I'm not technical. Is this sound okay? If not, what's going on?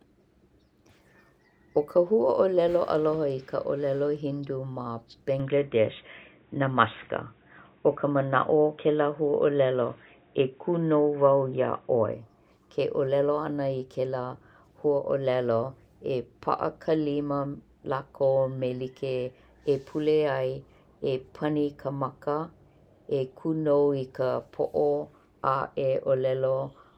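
No, not quite. From about 5.40 to 12.13 seconds the speech suddenly goes dull and boxy, as if someone swapped microphones, then snaps back to normal. Nothing above about 3.8 kHz gets through there, so the crisp top end vanishes. The level shifts a little and a faint new background noise appears. The change happens instantly with no gap. The likely cause is an input switched to a poorer device, such as a headset, and then back again.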